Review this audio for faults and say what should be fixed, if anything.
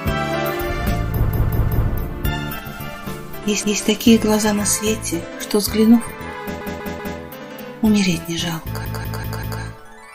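There are repeated frames in four places: the same 0.19 s chunk of audio plays again and again, giving a stutter. It repeats three extra times from 1.30 to 1.87 s, once from 3.63 to 3.82 s, three times from 6.61 to 7.18 s, and four times from 8.85 to 9.62 s. That block length fits a run of about six compressed frames being written or sent more than once, which pads the clip by about 2.1 s overall. To prevent it, check the encoder's write path or the transport for retransmitted or duplicated frames.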